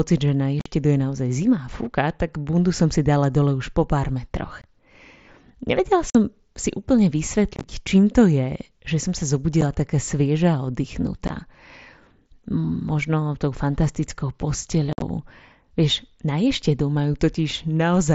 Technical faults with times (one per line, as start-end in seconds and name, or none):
0.60-0.66 unconcealed Bluetooth headset packet loss
4.62-4.64 unconcealed Bluetooth headset packet loss
6.10-6.15 unconcealed Bluetooth headset packet loss
7.56-7.64 unconcealed Bluetooth headset packet loss
9.61 unconcealed Bluetooth headset packet loss
11.28 unconcealed Bluetooth headset packet loss
14.93-15.02 unconcealed Bluetooth headset packet loss